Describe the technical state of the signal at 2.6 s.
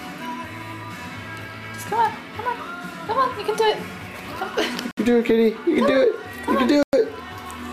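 At 2.6 s the signal is intact, with no audible dropout, distortion, or other technical fault at that moment.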